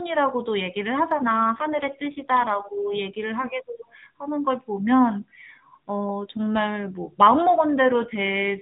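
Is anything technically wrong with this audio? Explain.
Yes. An AMR rate drop occurs from 1.14 to 2.97 s and again from 7.89 s to the end. The link apparently forced the AMR-NB codec to shed bits for error protection, so the speech turns buzzier and more synthetic within the same 4 kHz band, with no gap, fitting a fall from 12.2 to 5.9 kbps.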